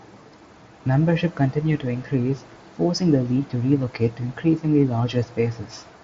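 Nothing's wrong with this speech recording: it's simply coming over a Bluetooth headset link using the wideband mSBC codec, so the audio tops out around 7.7 kHz, just as you'd expect from that path.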